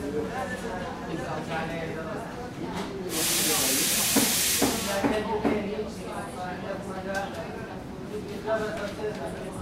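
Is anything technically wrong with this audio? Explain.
Yes. There are compressed frames skipped at 3.21 s, 8.06 s and 9.48 s. Runs of encoded frames never reach the output, either missing from the stream or rejected by the decoder as corrupt, so playback leaps forward. About a third of a second of material vanishes at 3.21 s and 9.48 s, and roughly half that at 8.06 s.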